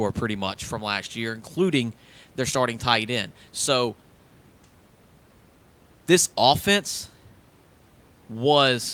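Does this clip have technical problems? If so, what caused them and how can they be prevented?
No, nothing here points to a technical fault: the speech comes through steadily, and the only extra sound is the room's own background noise sitting about 34 dB below the voice, which belongs to the recording itself rather than to anything going wrong in the system, so there's nothing that needs preventing.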